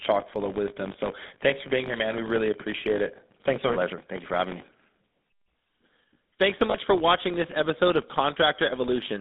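Throughout the speech runs a buzz at 50 Hz from a filter restarted on every block. Each block starts from silence and opens with a small transient, which fits 20 ms blocks. A waveform shows evenly spaced ticks that grow with the signal's level, and a spectrogram shows faint vertical striations every 20 ms.

The speech also carries GSM full-rate codec damage, plainly audible as a buzzy, gravelly roughness, which fits the 13 kbps codec. A spectrogram shows a band from 150 Hz to 3.7 kHz with nothing above it and coarse, grainy harmonics.

At 1.28 s, just before "for being here man", a short stretch of lost GSM frames, about 20 ms and consistent with a single frame, is bridged by repeating the last good frame. The result is a brief metallic ring that shows as a smeared, static patch. At 6.70 s, before "for watching this episode", a longer ring of about 40 ms, pointing to two frames.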